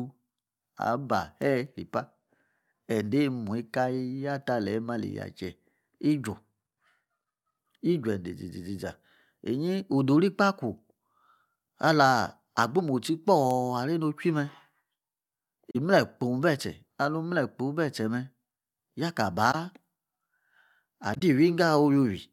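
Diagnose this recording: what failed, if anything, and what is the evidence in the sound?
Three brief events interrupt the speech, at 15.71 to 15.76 s, 19.51 to 19.55 s and 21.14 to 21.21 s. Each lasts about 40 to 75 ms. This points to the codec stage: corrupt frame concealed. Damaged AAC frames were detected and the decoder papered over them by muting or reusing scrambled spectral content. The lengths fit roughly two frames for the first two events and four for the last.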